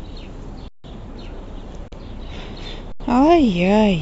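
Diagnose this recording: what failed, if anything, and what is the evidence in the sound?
Buffer underrun with held sample: speech halts flat at 0.68 s (160 ms), 1.88 s (40 ms) and 2.92 s (80 ms), then resumes softly with no audio lost.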